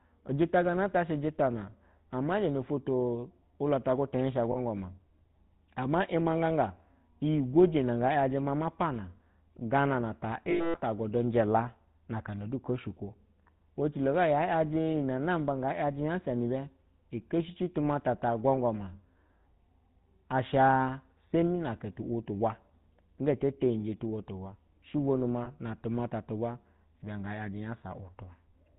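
From start to finish the speech has a buzzy, gravelly roughness and a dull top with nothing above 4 kHz. This is the GSM full-rate codec, and the damage is plainly audible. The character fits the 13 kbit/s GSM full-rate coder, which models the vocal tract and drives it with a coarse train of regularly spaced pulses. Because it keeps only every third excitation sample, fine detail turns into buzz.

At 4.52 to 4.58 s there is a brief, rough metallic ring. These are lost GSM frames. The gap is about 40 ms, which fits two 20 ms frames. The decoder fills it by repeating the settings of the last good frame. At 10.5 to 10.78 s a longer stretch turns harsh and metallic. It breaks up over about 240 ms, with about 220 ms missing in total and the longest unbroken dropout lasting about a tenth of a second. At 25.44 to 25.49 s a single short ring fits one lost 20 ms frame.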